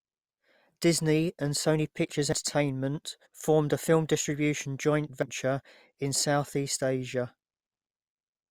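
At 2.33 s the speech skips forward with no silence in between. About a tenth of a second is missing and the two edges are butted together. This is audio missing between chunks, likely from a recorder working in 3.0 s blocks and dropping material at each changeover. On a waveform it appears as a sudden discontinuity in level and phase. On a spectrogram it is a vertical seam where the harmonic tracks jump instead of gliding.

From 3.25 to 3.27 s comes damaged data in a compressed stream. Corrupted bytes made the decoder misread its frames and hunt for the next valid header, producing a brief glitch. A spectrogram shows a short vertical disturbance unrelated to the surrounding speech.

At 5.22 s the same chunk-boundary skip recurs, again cutting out about a tenth of a second. It leaves the same abrupt seam in the waveform and the same broken harmonic tracks on the spectrogram.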